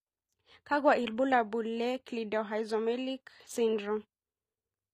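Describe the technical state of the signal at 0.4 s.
The treble at 0.4 s sounds bright but synthetic, with s sounds gritty and metallic, as they are across the whole clip. This is likely HE-AAC compression at a rate near 24 kbps, where the upper band is rebuilt by copying lower harmonics upward rather than coded directly.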